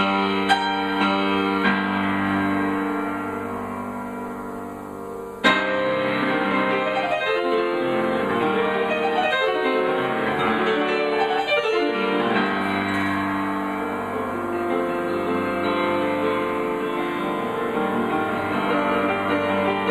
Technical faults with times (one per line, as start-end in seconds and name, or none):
none